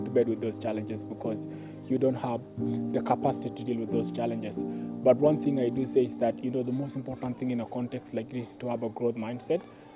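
Nothing here stands out as a technical fault; the audio just runs along without anything going wrong that a listener would catch.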